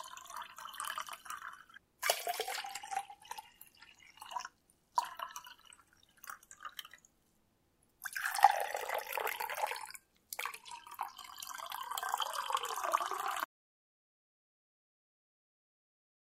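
At 13.45 s the sound stops abruptly and the remaining 2.86 s, to the end of the clip, is an audio dropout to silence, with no room tone or noise floor beneath it. The cut lands mid-flow rather than on a natural pause, and nothing returns before the file ends. The likely cause is a lost input, such as a disconnected source, a broken link or an accidental mute, while the recorder kept writing empty samples.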